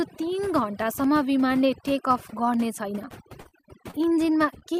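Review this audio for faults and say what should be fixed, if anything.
Overdone noise removal affects the whole clip. The reduction was set so aggressively that individual frequency bands near the estimated noise floor were pulled almost to nothing, and the quieter parts of the speech were removed along with them. The background drops and breaks up into twinkling specks. Unlike the packet-loss faults below, this colouring is constant rather than tied to particular moments. Apply gentler reduction, or capture a cleaner recording so less is needed.

Periodic USB or driver dropouts start at 0.54 s and repeat every 0.5 s to the end of the clip. Each time, a little audio is lost and replaced by silence, heard as a regular tick that only sounds while there is signal. What separates this from packet loss is the strict clockwork spacing and the hard silent gap, with no smeared continuation filling the hole. 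Stop the background task that is blocking the USB bus or audio driver, or update the driver.

Repeated packet loss (robotic sound) runs from 3.11 to 3.95 s. Five gaps total about 120 ms of missing audio, the longest about 37 ms. Each gap was patched by continuing the preceding sound, so roughly 14% of that stretch is synthetic fill. The result is choppy. Unlike the driver ticks, these gaps are filled rather than silent, and they cluster in one stretch. Use a more stable network path or a larger jitter buffer.

Short concealed packet loss occurs at 4.59–4.64 s. About 20 ms never arrived, and the receiver filled the gap by extending the previous sound, then blended back into the real audio. It is heard as a brief smear or wobble. It differs from the robotic stretch in being a single isolated hole rather than a run of them. Improving network reliability or adding forward error correction would prevent it.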